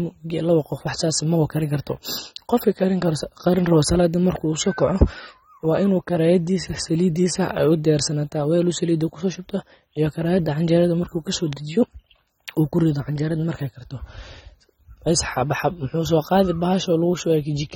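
AAC compression runs through the whole speech clip. The sound is plainly damaged by a perceptual codec, likely AAC-LC working at a low bitrate, roughly 24 kbps. To save bits the encoder quantises each frame's spectrum coarsely against a hearing model and discards what it judges least audible. Nothing remains above 16.5 kHz, so the top end is cut off. The result is dull and smeared, with a warbling, fizzy edge on sibilants and held sounds.

A loud pop hits at 4.36 s and another at 11.53 s, each a single sharp click about 20 ms long. The first peaks about 5 dB above the surrounding speech and the second about 10 dB above it, so the later one is louder. Each is likely a sudden voltage step or pulse, such as a switch transient or static discharge, added on top of the signal. The speech carries on uninterrupted beneath both.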